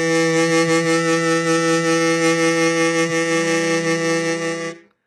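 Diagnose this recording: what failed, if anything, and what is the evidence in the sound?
The codec stage likely failed. Throughout the music, HE-AAC compression damage is heavy: the treble sounds synthetic and gritty, consistent with a bitrate near 16 kbps. A spectrogram shows a hard ceiling at about 11.8 kHz, with smeared, copied-up high bands above the coded core.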